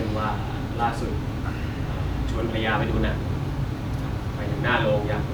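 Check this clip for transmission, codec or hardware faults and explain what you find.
Listening turns up no fault anywhere in the speech. There is no event in the recording that calls for an explanation.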